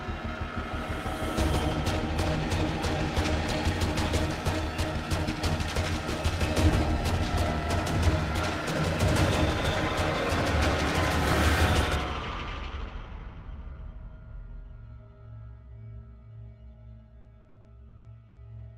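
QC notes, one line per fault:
17.21–18.40 s, repeated packet loss (robotic sound): seven gaps in about 1.2 s, the longest 80 ms, each patched by continuing the preceding sound, so roughly a third of the stretch is filler. Unlike a single dropout, the holes recur close together, making it choppy.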